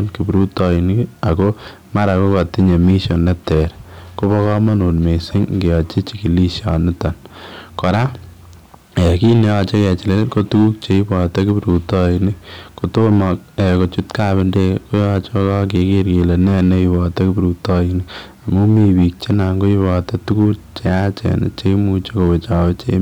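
Hard clipping runs through the whole speech clip, from start to finish. The signal arrives at a stage about 8 dB hotter than it can pass, so every peak that exceeds the ceiling is sheared off flat, a few percent of the samples in all. Those squared-off tops generate harmonics high above the original content, heard as a gritty crackle riding on the louder syllables and a rough, buzzy edge on stressed moments.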